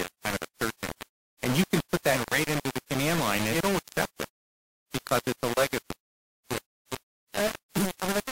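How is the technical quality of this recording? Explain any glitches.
Pretty rough, honestly: the speech is wrapped in heavy grainy distortion from start to finish. It sounds like low bit depth without dither, likely just a few bits with plain rounding, so the error tracks the signal, leaving noise nearly as loud as the speech, with quiet tails sputtering or dropping to silence.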